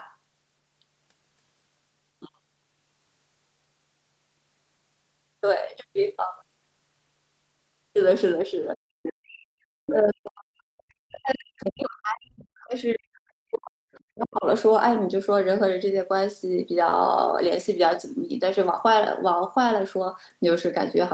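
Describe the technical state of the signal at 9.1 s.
A short burst of the other side's voice leaking through runs from 9.03 to 9.10 s, sitting about 10 dB below the talker. The likely cause is loudspeaker playback that the echo canceller failed to fully subtract. On a spectrogram it shows as a faint second set of harmonics overlapping the main ones.

Immediately after, from 9.09 to 9.55 s, the speech is suppressed in double talk. The canceller, likely confused by both sides talking at once, pulls the talker's level down by as much as about 40 dB for roughly half a second. The waveform's envelope collapses abruptly, and the spectrogram fades to near-empty bands before the speech returns.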